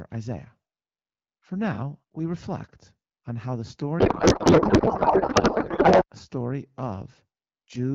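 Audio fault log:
3.99 to 6.04 s, codec payload misread: the AMR-WB stream, clear at around 12.65 kbit/s before and after, collapses into garbled noise and warble that barely tracks the speech. The octet-aligned packing is evidently being read as bandwidth-efficient, so every field is shifted and the decoder builds nonsense from valid-looking frames. On a spectrogram, harmonic bands give way to smeared, irregular energy.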